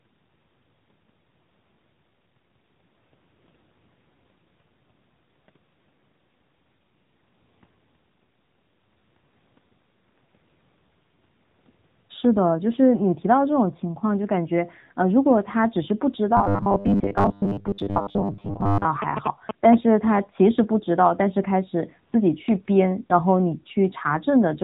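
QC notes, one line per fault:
Throughout: AMR narrowband mobile codec. The speech has the buzzy, synthetic edge of AMR-NB at a low rate, consistent with roughly 8 kbps, and nothing passes above 4 kHz. A spectrogram shows a hard ceiling there, with smeared, blocky harmonics below it.
16.37–18.85 s: robotic sound from repeated short buffers. The speech turns into a rigid metallic buzz locked at 100 Hz, most likely from 10 ms chunks being repeated while fresh audio arrives too seldom, with most of this stretch repeated. The waveform shows identical short cycles, and the spectrogram shows flat 100 Hz harmonic stripes.
19.02–19.75 s: GSM signalling bursts. A galloping run of short buzzes at about 217 Hz sits only about 5 dB below the speech. It comes from a nearby 2G phone signalling, with the radio bursts rectified in the audio circuit. The waveform shows sharp, evenly spaced spikes, and the spectrogram shows vertical lines with a 217 Hz comb.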